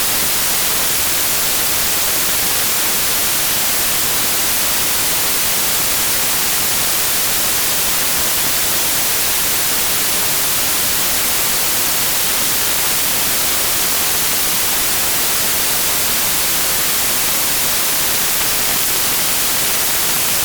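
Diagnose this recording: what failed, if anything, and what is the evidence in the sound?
Sample-format conversion failed: samples built from the wrong bytes put fast-changing low bits in charge, producing loud, harsh broadband noise throughout.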